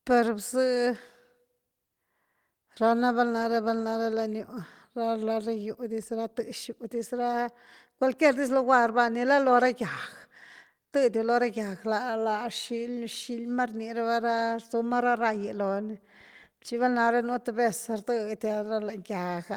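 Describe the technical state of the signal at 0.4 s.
At 0.4 s the speech signal is intact, with no dropout, clipping, glitch or other technical fault.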